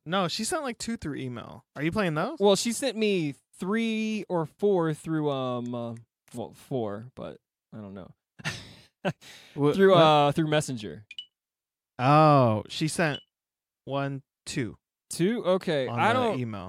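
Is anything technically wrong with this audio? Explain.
No, nothing in this recording stood out as a technical problem on listening.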